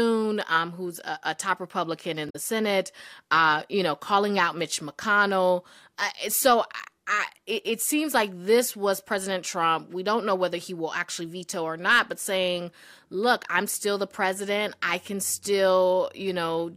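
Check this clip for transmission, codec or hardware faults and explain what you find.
One fault is present, at 2.29 to 2.36 s: damaged data in a compressed stream. A stretch of the coded speech is corrupt. The decoder misreads those frames, loses sync and hunts for the next valid header. The result is a brief disturbance of about 70 ms.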